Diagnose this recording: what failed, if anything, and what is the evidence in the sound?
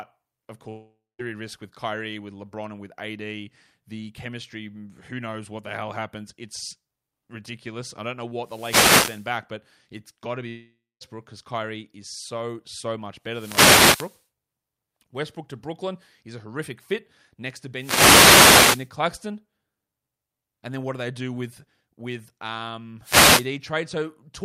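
Network stage: at 0.69–1.21 s and 10.49–11.03 s, half a second of speech vanishes into a fading buzz, then silence, likely a long network dropout.

Analogue radio link: wireless microphone noise hits at 8.38–9.34, 13.24–14.25, 17.75–18.91 and 23.01–23.50 s sound like swishes of static as reflections cancel the FM signal.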